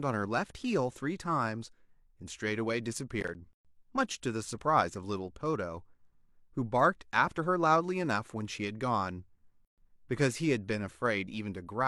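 At 3.21 s the speech picks up a short burst of processor overload crackle that lasts until about 3.35 s. The processor is falling behind on its small audio buffers, and each one that misses its deadline drops out as silence. The pattern suggests buffers of roughly 10 ms with something like seven misses. Those hard-edged little holes stack into a gritty tearing over the speech and clear once the load eases.

Right after that, at 3.53 s, there's a gap at a join of encoded pieces. The sound cuts out for about 116 ms and then resumes from where it stopped. A second one turns up at 9.65 s and runs about 130 ms. They're 6 s apart, so the speech was encoded in separate chunks and joined without trimming. Each chunk's leading encoder delay and padded final frame remain in the audio as dead air, and the codec softens the cut edges.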